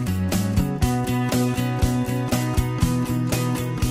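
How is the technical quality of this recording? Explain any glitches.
The technical quality of this recording is good, and there are no glitches to explain.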